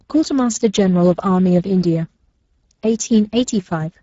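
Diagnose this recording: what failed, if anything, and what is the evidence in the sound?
Codec stage: Speex codec damage throughout. The speech is hoarse and noisy because the codec has too few bits for the excitation, and nothing remains above 7.7 kHz. The damage is steady, unlike bursty packet loss.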